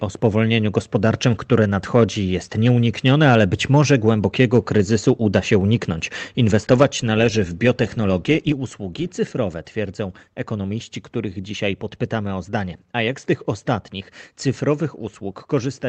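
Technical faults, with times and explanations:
0.77–2.04 s, 6.53–6.85 s and 7.67–7.70 s, microphone overload: the loudest peaks get their tops flattened, so there's a harsh, crackly edge on them. The first stretch only pushes about 2 dB past the limit, touching under 1% of samples. The one just before "należy w" is the worst, about 5 dB over with a few percent clipped. The short one right after "należy w" is about 1 dB over. Likely an input gain set too hot for the converter.
6.83 s and 8.52 s, microphone volume stepped down: the voice and the background both drop suddenly, by about 3 dB and then about 5 dB. The first drop lands right at the end of that heavy clipped burst. The second comes just before "usługi cyfrowe twierdzą ekonomiści". That pattern points to the call software likely hearing the overload and pulling the device's input gain down in steps. The level doesn't fade, it jumps, all within the Opus call path's roughly 8 kHz band.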